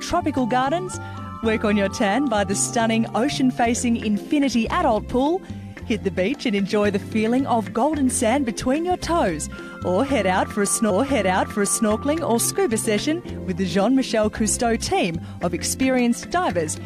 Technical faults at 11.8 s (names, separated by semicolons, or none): stream segment repeated